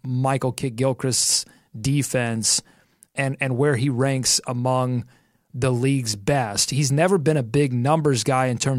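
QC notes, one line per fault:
Nothing to flag here; the speech comes across without any problems worth a note.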